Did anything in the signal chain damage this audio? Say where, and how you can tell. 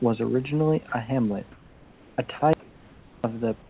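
Yes. Sound dropped by the voice detector at 0.89–0.92 s and 2.39–2.42 s: 30 ms bursts become steady noise, likely the call's voice detector misjudging sound as background.

Comfort noise in place of the background at 1.52–2.18 s and 3.62 s to the end: real room texture turns featureless and about 2 dB quieter, likely synthetic fill during discontinuous transmission.

Audio dropout to a faint residue at 2.53–3.24 s: the signal cuts abruptly, leaving only a faint trace roughly 40 dB down, likely the wanted signal lost while the path after the break stayed live.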